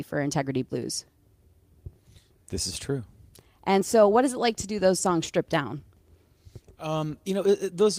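Nothing technical goes wrong anywhere in this speech, so there's no fault to point to at any moment.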